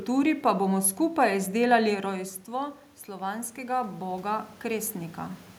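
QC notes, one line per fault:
2.46 to 5.46 s, automatic gain rising: the input level fell by about 12 dB once the talker moved back from the microphone around 2 s, and the automatic gain control answered by ramping its gain up by about 10 dB over three seconds. Because the gain acts on everything the microphone picks up, the voice climbs back toward its earlier level while the room noise swells up with it, so the background is louder by the end.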